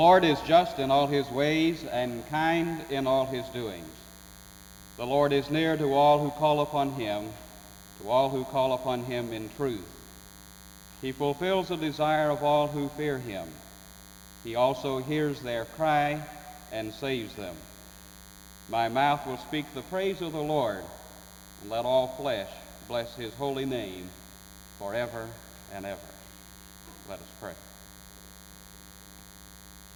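From start to finish a thin, steady buzz sits under the sound, well below the main signal. It is DECT cordless phone buzz: a nearby DECT handset or base transmits a radio burst every 10 ms, and the audio circuitry rectifies it, producing a 100 Hz tone rich in harmonics.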